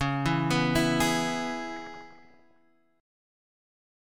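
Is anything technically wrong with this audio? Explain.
Yes. From 1.76 to 2.57 s, short blips of noise in single sub-bands appear. This is DAB burbling: weak-reception bit errors slip past correction, making individual MP2 sub-bands jump in level.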